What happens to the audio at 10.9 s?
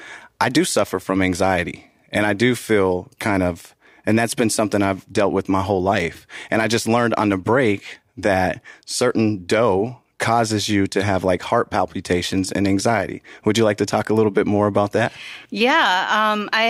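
Nothing goes wrong at 10.9 s; the speech carries on without any dropout, click, distortion or other technical fault at that moment.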